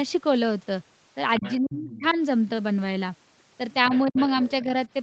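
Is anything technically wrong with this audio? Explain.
Yes. This speech has two related echo-control faults. The spectrum tops out near 8 kHz, as expected for this call path.

Other side's voice leaking through occurs at 1.37–1.57 s, 1.73–2.14 s and 3.92–4.64 s. A second, fainter voice runs under the talker, about 15 dB down in the first two stretches and about 20 dB down in the last. The likely cause is the far end playing on the talker's loudspeaker and being picked up by the microphone, with the echo canceller leaving a residue. On a spectrogram it appears as a separate set of weak harmonic bands overlapping the main voice. On a waveform it fills what should be quieter gaps with low-level energy.

Speech suppressed in double talk occurs at 1.58–2.18 s, 3.89–4.17 s and 4.65–4.69 s. The talker's level collapses, by about 40 dB in the first event (roughly half a second affected in total), about 35 dB in the second, and only about 5 dB in the brief last dip. 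This likely happens because the canceller, faced with both sides talking at once, treated the talker as echo and attenuated everything. The waveform shows abrupt envelope holes or chopped segments, and the spectrogram shows the talker's bands fading or vanishing in those windows.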